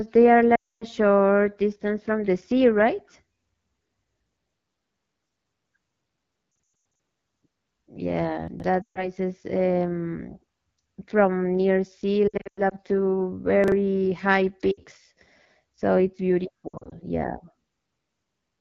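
Throughout, the speech runs through the AMR wideband (HD Voice) codec at a low rate, which fits the 8.85 kbit/s mode. At that rate the encoder has too few bits to describe the excitation pulses driving its vocal tract model, so the speech turns audibly rough and raspy. The band above 6.4 kHz is filled with shaped noise rather than real detail.

At 0.56 to 0.85 s there are lost AMR speech frames: a solid run of about 260 ms failed on the radio link, and the decoder kept replaying the last good pitch and vocal tract settings while lowering the gain. The sound smears, fades out quickly, and comes back weak and rough. The same concealment recurs at 6.51 to 6.99 s, where about 320 ms is lost in bursts of up to 100 ms spread over nearly half a second, producing a stuttering warble.

At 8.48 to 8.64 s, chunks play out of order. A 40 ms piece of audio was written three chunks late, so it sounds after material that should follow it. 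Nothing is missing, but there are three hard joins and the moment sounds jumbled.

Frame losses return at 8.82 to 9.08 s (about 140 ms in one run) and at 12.27 to 12.75 s (about 240 ms, scattered, with runs up to 100 ms). A second out-of-order chunk at 13.64 to 13.72 s is a 40 ms piece one chunk late, heard as a brief scramble. Further lost frames follow at 14.71 to 14.81 s, a short 60 ms dip, and at 16.68 to 16.95 s, about 140 ms in runs up to 60 ms, each time a wobble and fade before the roughened speech resumes.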